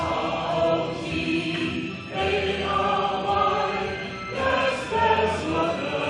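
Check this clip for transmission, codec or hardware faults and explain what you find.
No faults turn up anywhere in the clip. There is nothing to flag at any point in the audio.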